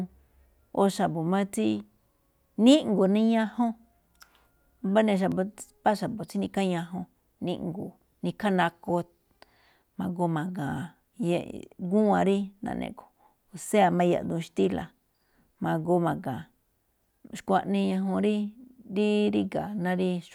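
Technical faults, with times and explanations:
5.32 s, dropped buffer (overrun): an abrupt jump forward in the speech, with roughly 15 ms of audio missing and the two sides butted together. The likely cause is samples being overwritten before they were read. Unlike a dropout, no silent gap appears.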